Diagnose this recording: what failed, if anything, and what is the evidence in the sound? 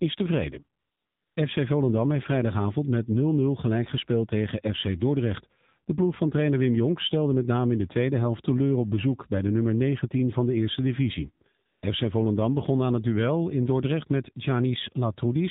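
At the codec stage, the AMR narrowband mobile codec runs at a low mode that fits about 7.4 kbps. It removes everything above 4 kHz and leaves the speech plainly buzzy and synthetic throughout.

In call processing, the sender judged the line silent and stopped sending speech frames. The receiver filled the gaps with smooth synthetic AMR comfort noise from 0.80 to 1.36 s and from 11.66 to 11.82 s, right after "van de eerste divisie".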